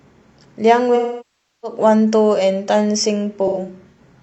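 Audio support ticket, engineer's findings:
AAC frame loss with concealment, 0.95–1.78 s: smeared, decaying patch fading toward silence, then back in. Spectrogram shows frozen, blurred bands thinning out. 3.47–3.99 s: scattered phasey, noisy gaps, each up to about a tenth of a second. The decoder is filling gaps from the last good spectrum.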